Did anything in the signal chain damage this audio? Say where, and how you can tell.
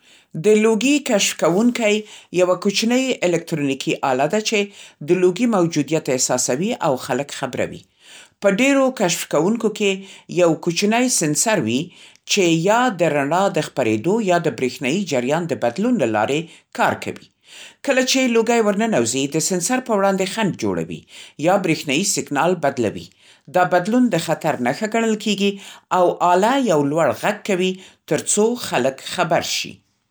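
No, nothing in this speech recording stood out on listening as damage from any stage of the signal chain.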